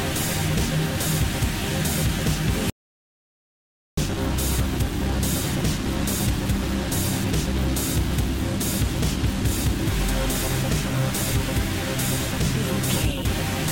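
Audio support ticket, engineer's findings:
Audio dropout to silence, 2.70 to 3.97 s: 1.28 s of silence, no room tone, abrupt cut and resume. Likely input lost upstream while recording continued.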